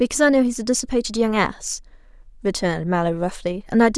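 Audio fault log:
No faults are heard anywhere in the speech. Nothing in the signal chain draws attention to itself at any moment.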